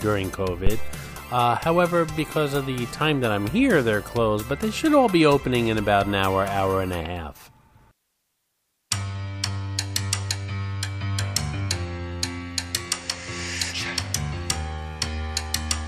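A phantom power thump at 0.67 to 1.04 s: a supply switched on or off on the live input sends a step through the coupling capacitors, giving a deep thump peaking at about -7 dBFS that decays within 84 ms.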